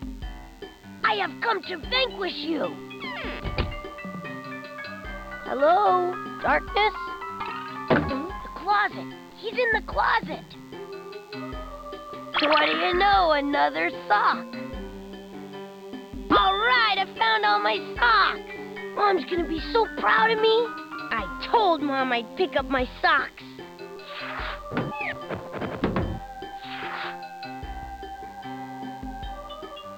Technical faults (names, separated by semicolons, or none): DECT cordless phone buzz